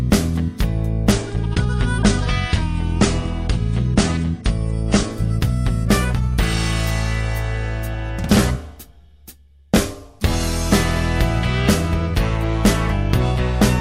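Adaptive stream at a lower bitrate, from 1.12 to 5.12 s: the player switched abruptly, without any gap, to a leaner encoding, which fits a drop from roughly 96 to 32 kbit/s. Treble above 10.2 kHz vanishes and compression artefacts thicken until full quality returns.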